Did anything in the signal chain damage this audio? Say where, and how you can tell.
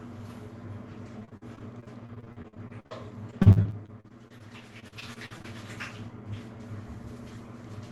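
Yes. Packets were repeatedly lost or late on the network, in three bursts: 1.19 to 2.93 s, 3.31 to 4.42 s and 4.80 to 5.46 s. The receiver patched each short hole, none longer than about 47 ms, by stretching the preceding sound. With roughly a quarter of each stretch filled in this way, the sound turns choppy and robotic, with pieces missing.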